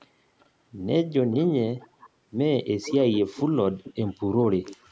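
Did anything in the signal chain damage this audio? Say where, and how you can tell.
Yes. Delayed repeats of the speech trail it in six places: 0.40–0.45 s, 1.31–1.45 s, 1.80–2.09 s, 2.82–3.19 s, 3.84–4.13 s and 4.65–4.90 s. Each repeat arrives 437 ms behind the original. They range from barely audible near 0.4 s to fairly prominent, about 15 dB below the speech, at 1.3 and 2.8 s. This is echo leak in the call processing, likely from a loudspeaker-side echo canceller letting part of its microphone pickup return into the call.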